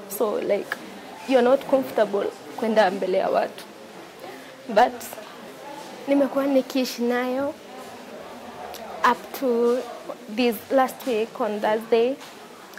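No technical faults can be heard anywhere in the audio. Nothing in the sound points to an error in how it was captured, processed or delivered.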